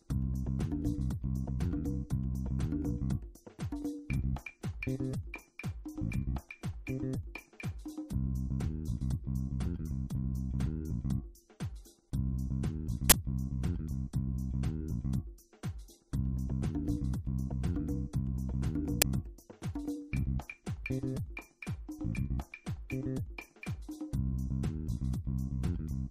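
Two glitches from an uninitialised buffer break into the audio: a loud, harsh burst lasting about 23 ms from 13.10 to 13.12 s, and a shorter 6 ms one at 19.02 s. Memory was played out before real audio was written into it. The lengths fit a 1024-sample buffer and then a 256-sample buffer. On a waveform each shows as a hard-edged block of large, erratic values; a spectrogram shows bright broadband vertical stripes.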